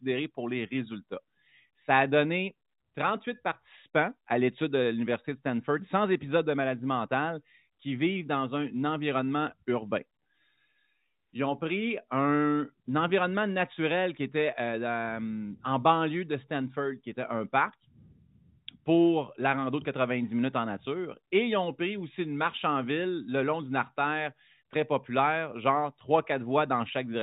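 Nothing in the speech signal points to a technical fault: the audio sits within the narrow telephone band that G.711 telephone coding allows, with nothing above 4 kHz, which fits a 64 kbps mu-law path, and any trace of the coding is faint at most.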